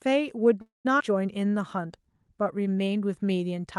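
Speech over a call path with three timing faults, all carried on Opus-style coding that rolls off around 12 kHz. From 0.61 to 0.87 s there's a call audio freeze. The last sound gets stretched into a fading buzz or hiss and then about 160 ms of silence before things pick up exactly where they stopped. That adds roughly a quarter-second of delay without losing anything, likely because packets stalled and the jitter buffer ran dry. Right after, at 0.99 to 1.02 s, comes a skip ahead. Roughly a tenth of a second of audio is simply gone, and the two sides are butted together with barely any gap, which is audio dropped either on the way or by an overflowing jitter buffer. Then from 1.38 to 2.84 s there's a jitter buffer slow-down. Playback runs at about 92% speed with the pitch unchanged because the receiver is repeating pitch periods to rebuild its reserve. That adds 121 ms, and you can hear it in the drawn-out sounds.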